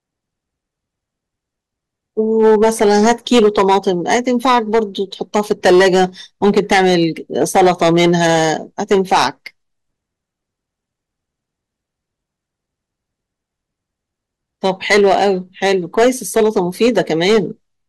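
Hard clipping hits the speech at 2.4–4.79 s, 5.35–6.05 s, 6.44–7.04 s, 7.41–8.52 s, 8.91–9.27 s, 14.65–15.28 s and 15.63–17.38 s. The signal overdrives a stage by about 8 to 11 dB, so peaks are sliced flat, adding high harmonics heard as harsh fuzz on every loud syllable.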